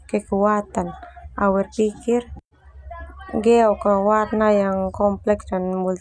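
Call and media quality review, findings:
No technical faults found in the signal path for this speech recording; level, continuity and timing are consistent throughout.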